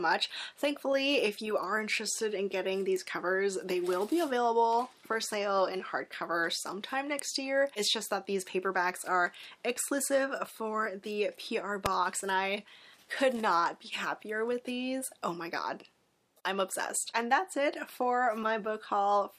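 Three sharp snaps sit on top of the sound, at 2.96 s, 7.19 s and 11.86 s. Each is over in a few milliseconds, and they get louder as they go, from around -20 dBFS up to around -10 dBFS by the last one. They read as an electrical switching spike, likely a nearby switch, motor or static discharge throwing a brief arc that the audio line picked up and laid over the recording.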